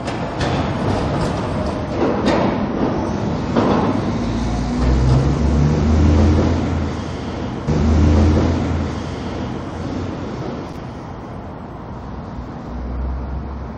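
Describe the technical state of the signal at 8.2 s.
At 8.2 s the audio sits inside a stream segment repeat spanning 7.67 to 9.65 s: the same 1.98 s segment was queued twice, so it replays after a small blip at the jump back.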